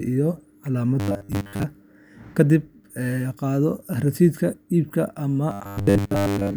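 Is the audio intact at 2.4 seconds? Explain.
Yes, the speech at 2.4 s plays through intact, with no fault at that moment.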